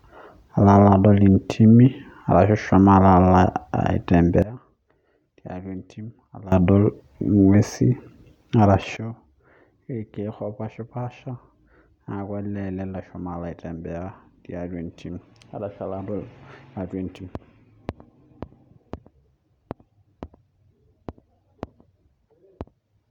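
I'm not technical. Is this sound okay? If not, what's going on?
No. The recording level was most likely switched down instantly, with no gradual fade, a sudden gain jump. The speech and the background noise drop together, abruptly much quieter, from 4.42 to 6.52 seconds, and again from 8.97 seconds to the end.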